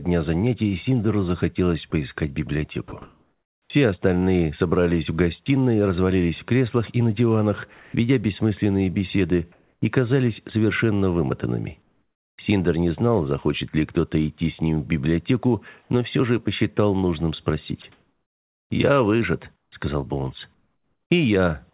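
Sound chopped by the voice detector, 2.88 to 3.70 s: the sound breaks up repeatedly, with about 720 ms in total replaced by a flat hiss. The likely cause is a sending voice detector that switched transmission on and off several times, with the receiver filling each gap with comfort noise. The call path's telephone-band coding, with nothing above 4 kHz, is audible throughout.

Sound dropped by the voice detector, 7.74 to 7.94 s: about 110 ms of quiet sound disappears inside a 200 ms stretch of steady noise. The sound returns when the detector triggers again. The likely cause is the detector treating that soft passage as background and halting transmission, so the receiver played comfort noise instead. The same thing happens briefly at 17.82 s, where about 20 ms is lost.

Comfort noise in place of the background, 9.52 to 9.82 s, 11.82 to 12.38 s, and 15.82 to 15.90 s: in each pause, the textured background is replaced by a smooth, featureless hiss. 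The background sits about 48 dB below the loudest sound in the first two and about 42 dB below in the third. The first replacement matches the original level. The second drops about 5 dB and the third about 2 dB. The likely cause is discontinuous transmission, with the receiver synthesising noise shaped only roughly like the real background. From 17.82 to 21.10 s, about 1.5 s of the background is replaced intermittently in the same way.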